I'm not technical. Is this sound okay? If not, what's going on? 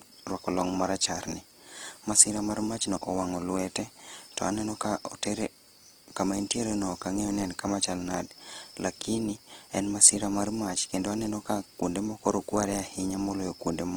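No. The audio was most likely squeezed hard by Opus compression, a way of shrinking files that throws detail away when it is short on space. It keeps the overall loudness in each range of pitch but patches over the missing detail with copies or noise. From start to finish, the speech therefore sounds rough and grainy, with a gritty, noisy edge where it should sound clean and smooth.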